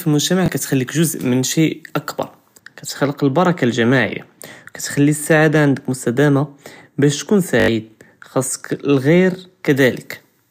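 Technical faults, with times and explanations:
0.46–0.48 s, 5.24–5.26 s and 7.6–7.68 s, repeated buffer: late audio made the device replay its last block, which fits a 20 ms buffer. It repeats once just before "קטחליק ג'וז' מן שי" and at 5.24 s, and four times at 7.6 s, giving short stutters. The waveform shows identical copies with hard joins, and the spectrogram shows vertical seams.
2.59–9.70 s, de-emphasis applied wrongly: after "ג'וז' מן שי אכבר" a treble cut meant to undo pre-emphasis acts on audio that never had any, sloping smoothly to about 11 dB down at 10 kHz relative to 1 kHz. The speech turns dull and muffled, and the spectrogram's upper band fades progressively darker.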